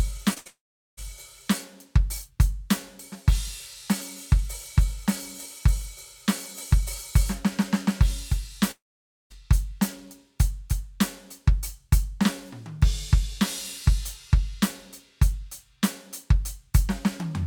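Right at the start of the music, between 0.33 and 0.38 s, a short concealed packet loss occurs: about 20 ms of audio failed to reach the decoder in time, and the receiver bridged the hole by extending the preceding sound for roughly 26 ms before blending back. The result is a brief smear in the music, over almost before it registers.

It runs straight into a burst of packet loss from 0.38 to 0.47 s, where about 80 ms in a row went missing. The receiver kept continuing the last sound for around 74 ms while turning it down, so the music briefly thins into a held, fading tail. It then resumes further on, with that slice absent.

From 0.47 to 0.99 s the trouble deepens into what is likely a long network dropout, with about 500 ms of audio never arriving. The concealment stretches the last sound and lets it fade, but this cannot hold for long, and roughly 410 ms of the gap is plain silence before the music returns further along.

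A second long network dropout, again likely network in origin, runs from 8.71 to 9.32 s. About 600 ms went missing. After a short faded continuation the sound drops to silence for roughly 530 ms, then the music picks up again past the lost section.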